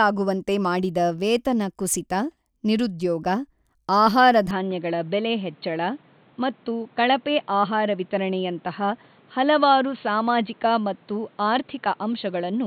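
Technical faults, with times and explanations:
4.51 to 12.66 s, input switched to a poorer device: At 4.51 s the speech abruptly turns dull and narrow, with nothing above 4.4 kHz. There is no gap and no clear level jump. A faint new background noise sits far below the speech. The likely cause is a change to a lower-grade microphone.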